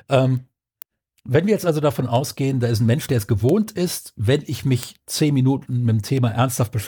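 From 0.37 to 6.62 s, word clock ticks recur about every 0.4 s: clicks where an unlocked clock, some 50 ppm off, slips one sample.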